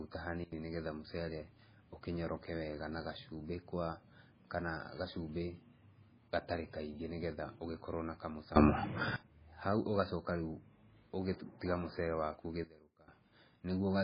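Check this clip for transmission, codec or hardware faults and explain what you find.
The speech carries two kinds of fault: heavy codec damage across the whole clip and three abrupt level changes.

MP3 compression is audible from start to finish. The sound has no content above 5 kHz, so sibilants lose their edge and the treble is missing. The band that remains turns watery and swirly as weak spectral lines drop in and out between frames, and consonant attacks smear. The likely cause is an MP3 encode starved of bits, which fits a very low bitrate around 16 kbps.

A sudden gain jump occurs three times. From 0.44 to 0.52 s the level falls by about 21 dB. From 8.56 to 9.16 s, right after "ũgĩkorwo na", it rises by about 24 dB. From 12.64 to 13.08 s it falls by about 19 dB. Each change arrives as a step with no fade, and speech and background noise shift together. That points to a likely cause in a digital gain setting applied without a ramp.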